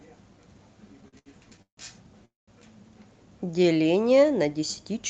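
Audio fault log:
1.01–1.79 s, repeated stalls (stutter): the sound catches six times as packets arrive late and the jitter buffer keeps emptying. Each wait is bridged by stretching the last sound, about 0.3 s in total, the longest 154 ms, so nothing is lost but the passage drags.
2.25–2.49 s, call audio freeze: the sound halts for 222 ms, briefly buzzing or hissing on before dropping to silence for about 180 ms, then resumes where it stopped. This is likely a network hold-up that drained the jitter buffer, inserting a gap without losing anything.
3.46–3.77 s, jitter buffer slow-down: this stretch plays at about 86% speed with unchanged pitch, lengthened by 53 ms. The receiver repeats single pitch periods to rebuild its reserve, so sounds are drawn out.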